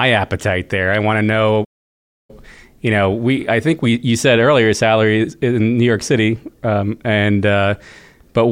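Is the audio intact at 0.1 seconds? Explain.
Yes, at 0.1 seconds the speech plays through intact, with no dropout, click, distortion or other fault at that moment.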